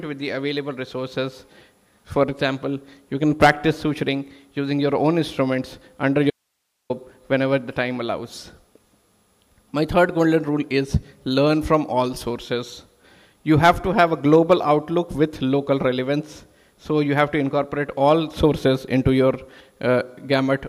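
The audio has an audio dropout to a faint residue from 6.30 to 6.90 s: an abrupt 0.6 s cut leaving hiss roughly 55 dB down, not a fade or true silence, likely a live path losing its signal.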